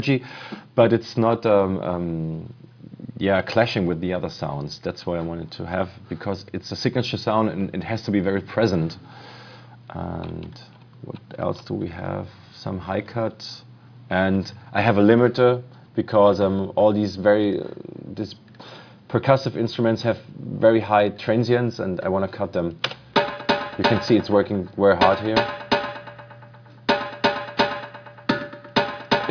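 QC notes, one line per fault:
Nothing stood out on listening.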